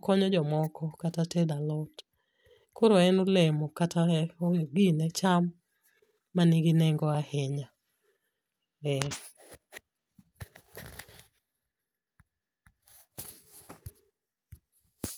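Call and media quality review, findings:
Single tick in the speech at 7.15 s. Block of digital silence, about 0.61 ms long. Probable component: playback/output stage, with an output buffer not filled in time. Samples drop hard to silence and return with no fade. The two abrupt edges, so close together, merge into one click rather than an audible hole.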